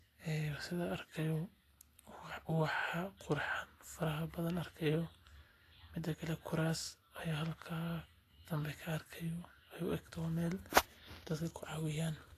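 Low-bitrate audio saved at a high bitrate runs throughout: the speech has nothing above 14.2 kHz. The likely cause is an earlier low-rate encode, fitting Vorbis near 34 kbit/s, re-saved as MP3 near 192 kbit/s, which cannot restore what was removed.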